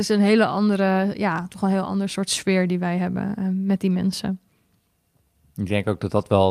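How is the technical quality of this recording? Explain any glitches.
Nothing in the recording stood out as a technical problem on listening.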